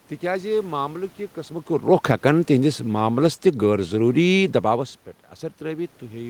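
From 1.77 to 4.94 s, automatic gain falling: reacting to a hot or noisy input, the AGC lowers gain by about 4 dB, so speech and room noise sink together.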